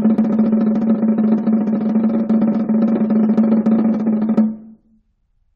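No technical faults are audible.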